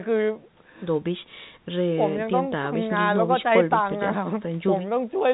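The speech carries the narrow band of ordinary G.711 A-law telephone coding at 64 kbps, with nothing above 4 kHz after the call's microphone processing, and no technical fault can be heard anywhere in it.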